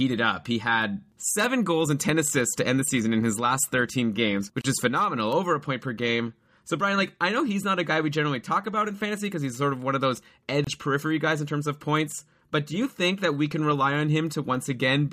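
At 2.91 s, between "assists to end the" and "in his last", and again at 3.79 s just after "in his last", the speech has a single sharp click. This is dropped samples, likely a couple of samples missing from the stream so the waveform jumps abruptly. The loss is too brief to remove any audible sound.

From 4.61 to 4.64 s, just before "is phenomenal over a", a 33 ms gap cuts into continuous speech. A 24 ms gap follows from 10.64 to 10.67 s. Each is a gap at a join of encoded pieces, recurring every 6 s. The separately encoded segments were joined without trimming the encoder's start delay and final-frame padding, so the sound stops, with edges smeared, and then resumes where it left off.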